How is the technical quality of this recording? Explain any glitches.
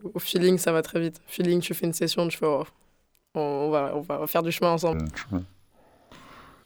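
The recording has one serious glitch near the end. From 4.93 s to 6.65 s, right after "va faire du chemin", stereo is read as mono. Left and right samples get played in sequence as one channel. The speech drops to half speed and a full octave lower. A faint mirrored copy also shows up in the upper spectrum.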